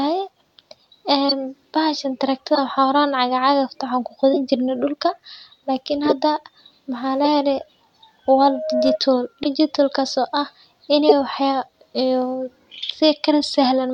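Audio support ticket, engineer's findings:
Corrupt frame decoded: brief chirps and noise bursts at 1.29–1.32, 2.55–2.58, 4.33–4.37 (before "jirne dulka lakin"), 6.04–6.13, 7.24–7.27, 9.43–9.46, 11.09–11.12 and 12.85–12.90 s. Decoder played damaged compressed frames. Mostly misplaced energy rather than gaps, so distinct from dropouts.

Loudspeaker feedback squeal: 624 Hz tone at 8.36–8.99 s, before "digital kaso ah", swelling over roughly 0.4 s to about speech level. Mic–speaker loop gain above one. A steady tone that grows, unlike a hum.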